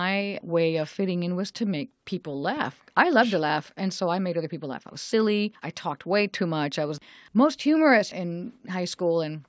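No technical faults can be heard anywhere in the speech. It has passed through a call's microphone processing, which trims the lowest bass and leaves nothing above 8 kHz, as expected for that path.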